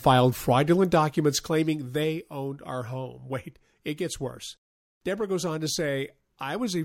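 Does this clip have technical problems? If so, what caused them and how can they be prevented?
Yes, there's zipper noise from 0.74 to 2.32 s, where the speech level drops by roughly 10 dB in 1 dB jumps, about seven a second, and each unsmoothed jump leaves a little tick. Ramp the gain per sample to prevent it.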